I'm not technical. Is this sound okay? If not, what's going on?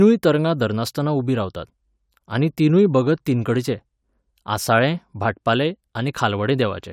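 Yes, nothing in this recording stood out as a problem when listening to it.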